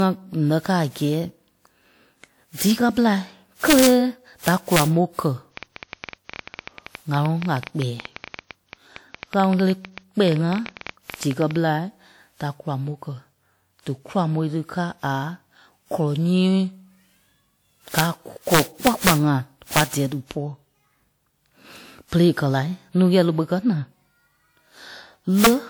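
Throughout, the speech sounds swirly, smeared and hollow, with soft attacks. This is generation loss. It likely comes from repeated WMA encoding at 96 kbit/s, around seven passes. Each pass requantised on a new frame grid, so noise and spectral holes piled up.

Integer overflow strikes at 3.70 to 3.87 s, right after "kɛ́ ɓelai", and again at 4.48 to 4.82 s. Peaks ran 1 to 2 dB past full scale. Instead of being limited, they wrapped to the opposite sign. Each one is a violent crack, harsher than clipping.

From 5.57 to 11.57 s a train of clicks ticks over the speech and its pauses. There are about 70, at about 10.9 per second, unevenly spaced. They peak roughly 10 dB above the signal. The likely source is interference or a faulty connection or power supply.

Integer overflow returns at 17.99 to 18.01 s and 18.54 to 19.11 s, then at 19.77 to 19.81 s, just before "dɛ̀ɛ dípɔ", and at 25.44 to 25.47 s. 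Overdrive reaches 4 dB. Each wrap flips the waveform across the full range and gives a sharp crack.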